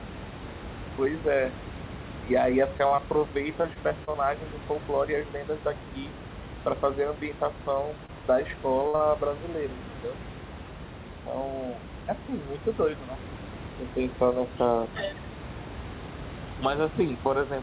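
At 2.78, 2.87 and 2.96 s, short concealed packet losses of about 20 ms each are filled by extending the preceding sound. Each gives a brief smear or wobble, isolated rather than continuous. From 3.62 to 4.16 s, repeated packet loss patches five gaps of up to 27 ms in quick succession, so the sound turns choppy with pieces missing across the stretch instead of wobbling once. Another short concealed loss smears 8.06 s. At 8.88 s, a burst of packet loss drops about 60 ms: the held sound fades as a buzz or hiss and resumes later with that part missing, a longer gap than a single smear. A further 40 ms concealed loss follows at 8.96 s. All of this sits on a band ending at 4 kHz, which points to a G.711 narrowband path.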